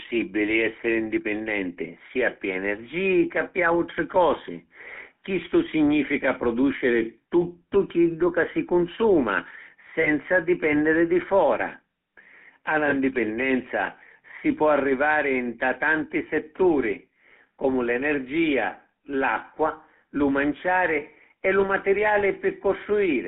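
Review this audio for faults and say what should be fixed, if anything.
The speech runs through a GSM full-rate codec for the whole clip. Its buzzy, gravelly texture fits a 13 kbps stream. The codec rebuilds sound from a vocal-tract filter driven by a sparse, regularly spaced pulse excitation. Fine detail in the excitation is thrown away, and the line band runs only from 200 Hz to 3.4 kHz. The codec damage is plainly audible as roughness on every voiced stretch, with no air or sibilant crispness above the band edge. To prevent it, carry the call over a wideband codec end to end, or capture the audio before it enters the GSM leg.

From 1.20 s to the end, de-emphasis is applied wrongly. A treble-cut stage meant to undo pre-emphasis acts on audio that never had any, or acts a second time. The response tilts smoothly downward, and at 10 kHz it sits about 11 dB below 1 kHz. Inside the narrow telephone band, this dulls the upper consonant region further, so the speech sounds muffled and thick on top of the codec's roughness. 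To prevent it, make sure exactly one de-emphasis stage is paired with the matching pre-emphasis in the chain.

Lost GSM frames occur at 10.02 to 10.10 s and 12.90 to 12.94 s. Each sounds like a single 20 ms frame gone missing. The decoder covers each gap by reusing the last good frame's filter and excitation settings. Each gap is short and never decays to silence. Instead it comes through as a brief rough, metallic ring in place of the expected sound. To prevent it, improve the radio link or add stronger error protection so frames arrive intact.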